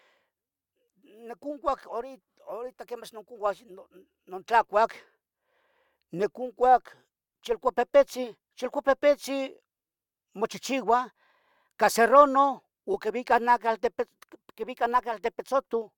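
No technical faults are audible.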